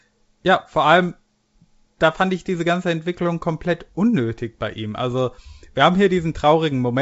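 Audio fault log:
No faults heard; wideband telephone coding sounds normal.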